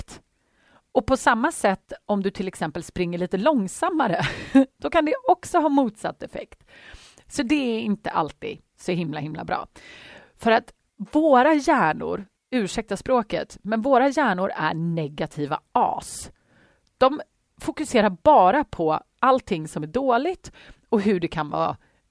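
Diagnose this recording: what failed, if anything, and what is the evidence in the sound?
Nothing in the signal chain failed: the speech signal runs continuously without audible dropouts, discontinuities, level jumps or other technical defects at any point.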